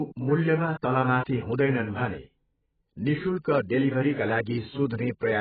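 A speech recording, and the whole thing sounds dull and smeared, with nothing at all above about 4.7 kHz. The top of the spectrum has simply been sliced off, and what's left has that thin, warbly, fizzy texture on sustained sounds and sibilants. It's heavy damage from AAC compression, most likely AAC-LC at a very low bitrate somewhere near 11 kbps. The encoder pulls its cut-off down and starves the remaining bands of bits. At 0.82 s there's a pre-echo: a short hiss spread over about 11 ms creeps in just ahead of a sharp attack, which then lands soft instead of crisp. That's the codec spreading its quantisation noise across the whole transform block, so noise meant for the loud onset leaks into the quiet moment right before it.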